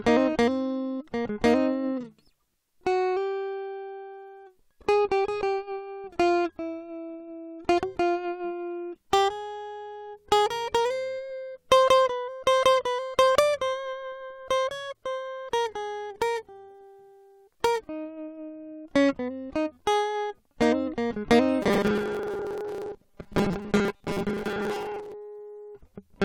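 Robotic sound from repeated short buffers in this music clip from 21.62 to 25.14 s: a rigid 200 Hz buzz with about half the audio repeated, likely from a 5 ms buffer looping while fresh audio arrives too seldom.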